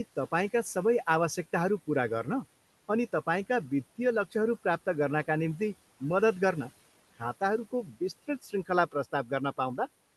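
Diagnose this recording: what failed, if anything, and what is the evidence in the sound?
Speech goes faint at 7.71–8.01, 8.42–8.70 and 8.92–9.31 s, about 13 dB down: speech cut by the noise suppressor in call processing, mistaken for noise.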